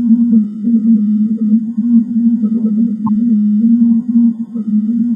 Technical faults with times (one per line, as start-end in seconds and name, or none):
3.06-3.09 corrupt frame decoded